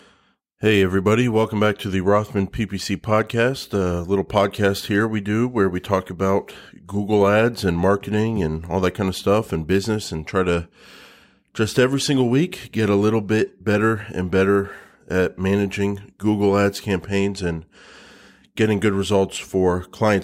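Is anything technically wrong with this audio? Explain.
No, nothing technically wrong stood out on listening to this recording.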